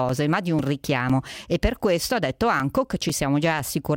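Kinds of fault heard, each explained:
Periodic USB or driver dropouts: regular ticks every 0.5 s in the speech, each a few milliseconds of silence where a background task stalled the USB bus or driver.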